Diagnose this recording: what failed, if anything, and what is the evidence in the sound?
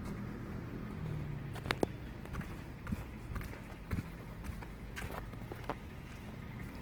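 Opus compression runs throughout, at the codec stage. The sound keeps its full bandwidth, up to 20.2 kHz, but tonal parts come out plainly grainy and rough. Starved bands are refilled with folded or noise energy, which fits a likely Opus music-mode encode near 16 kb/s.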